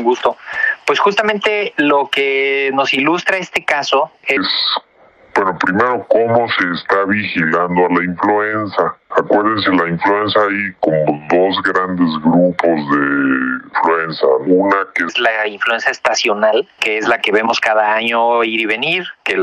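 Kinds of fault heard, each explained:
Section at the wrong speed: from 4.37 to 15.09 s the audio plays at 0.707 times its original rate, so everything drops about seven semitones and drags, deeper and slower together. This is likely from playback against a mismatched clock, until normal speed returns.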